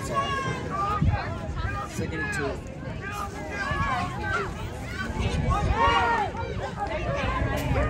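From 3.12 to 5.37 s the sound turns abruptly thin, bright and hissy-sibilant: pre-emphasis left on. The treble lift applied ahead of transmission, here matching the 50 µs FM curve, was never undone by the complementary de-emphasis, leaving 10 kHz about 11 dB hotter than 1 kHz. Unlike a simple treble shelf or harsh EQ, the boost rises steadily with frequency along that fixed curve, so the top octave is lifted most.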